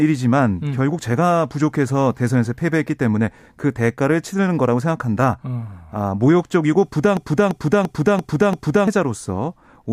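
A speech clip that, from 7.17 s to 8.88 s, breaks into a hard, mechanical stutter: the same fragment of about 341 ms plays five times back to back, repeating at roughly 2.9 per second. This is a system hang loop. The computer or driver stalled while the audio hardware kept replaying its ring buffer, and a loop of that length fits a 16384-sample buffer. Around a second and a half of real audio is lost in its place.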